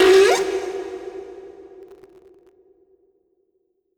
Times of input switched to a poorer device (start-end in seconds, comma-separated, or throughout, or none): none